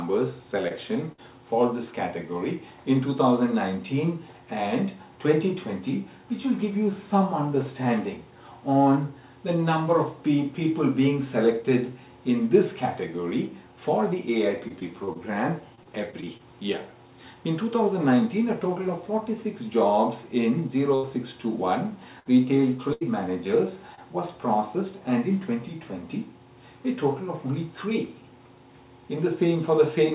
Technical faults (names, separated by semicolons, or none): short concealed packet loss; burst of packet loss; repeated packet loss (robotic sound)